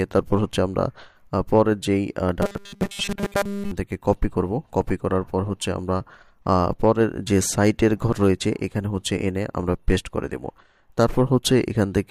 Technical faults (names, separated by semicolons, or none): robotic sound from repeated short buffers